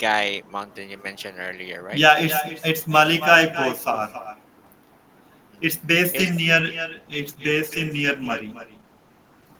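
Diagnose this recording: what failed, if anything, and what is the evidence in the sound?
Call processing lacks an echo canceller, so the far end's loudspeaker feeds back: every phrase is shadowed throughout, roughly 300 ms later, by a thinner copy about 11 dB down.

A call bitrate drop at the network and codec stage starts at 6.6 s and lasts to the end: the sound turns rougher and duller, which fits 32 falling to 16 kbps.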